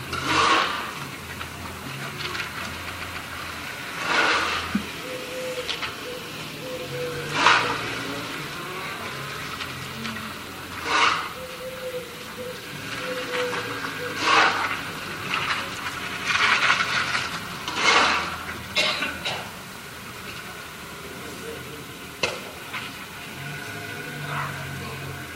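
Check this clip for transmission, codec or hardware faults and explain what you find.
Repeated frames occur four times: at 0.72 to 0.77 s a 46 ms block replays once, at 2.90 to 3.18 s a 139 ms block replays twice, at 16.05 to 16.23 s a 93 ms block replays twice, and at 20.88 to 20.97 s a 93 ms block replays once. A run of compressed frames arrived more than once, so the decoder played the same slice again. Each event is heard as a stutter, and each lengthens the audio by the repeated time.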